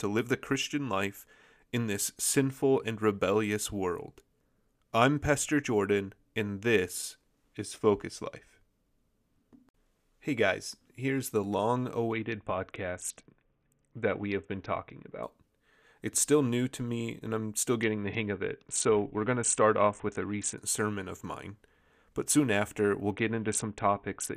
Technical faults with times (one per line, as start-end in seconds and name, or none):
12.13-15.23 Bluetooth SBC bit pool drop
17.82-20.58 Bluetooth SBC bit pool drop
23.12-24.37 Bluetooth SBC bit pool drop